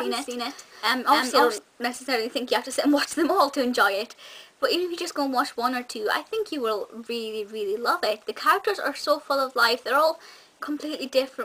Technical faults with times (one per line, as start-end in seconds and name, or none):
0.00-1.58 doubled audio track